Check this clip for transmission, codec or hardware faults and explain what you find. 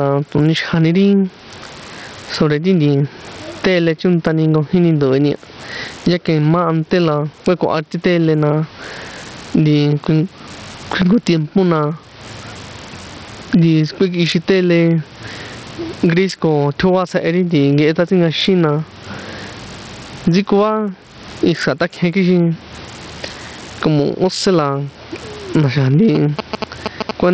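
Three faults are audible: gain pumping and heavy Bluetooth SBC compression throughout, and GSM signalling bursts at the very end.

Gain pumping runs through the whole recording. The room background sits about 41 dB under the speech, and the gain swings by around 20 dB. The likely cause is input gain set far too high and a fast limiter clamping it on every peak. Level differences between loud and soft passages shrink, and the speech sounds flattened and breathing.

Bluetooth SBC compression is also present from start to finish, and the damage is heavy. SBC splits the signal into a few wide sub-bands and shares out bits without a real model of hearing. At a low bit pool, consistent with roughly 64 kbps, the weaker upper bands are starved and everything else is coarsely quantised. The likely result here is treble that flickers in and out within the 8 kHz call band, plus a gritty, aliased roughness riding on the speech.

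GSM signalling bursts appear from 26.15 s to 27.11 s. A nearby 2G phone exchanging signalling with the network transmits short clusters of radio bursts, and the audio circuitry rectifies them into sound. The bursts repeat at 217 Hz, sitting roughly 15 dB below the speech, and are heard as the familiar galloping dit-dit-dit of short buzzes lasting just under a second.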